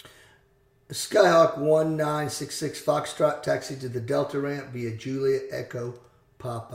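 Nothing stood out as a technical problem on listening to the clip.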